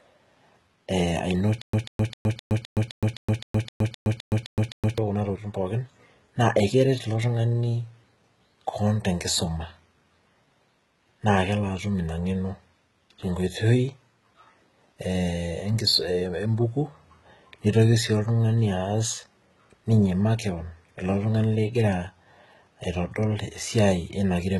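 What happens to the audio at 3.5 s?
A stutter with silent gaps runs from 1.62 to 4.98 s. The same 142 ms fragment of speech repeats 13 times, each followed by 116 ms of digital silence, likely from a stalled stream replaying its last buffer. The speech is also gritty and lispy, with nothing above 11.8 kHz. This is likely heavy HE-AAC compression, fitting roughly 16 kbps, with rebuilt, misaligned treble.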